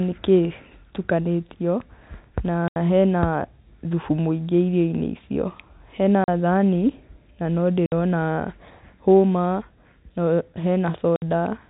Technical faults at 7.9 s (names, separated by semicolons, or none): packet loss filled with silence